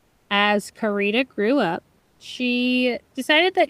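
Speech with comfort noise in place of the background from 0 to 0.29 s and again from 1.99 to 2.19 s, likely from discontinuous transmission such as Opus DTX. The room noise becomes a steady, featureless hiss about 4 dB and 2 dB quieter, not the dead silence a noise gate would leave.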